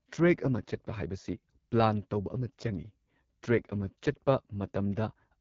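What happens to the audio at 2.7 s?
At 2.7 s the speech carries AMR wideband (HD Voice) codec damage, present through the whole clip. The codec models the vocal tract with pulse excitation up to 6.4 kHz and fakes the top band with shaped noise. The sound is rough and raspy, which points to one of its lowest rates, near 8.85 kbit/s. Nothing sounds above 7.5 kHz.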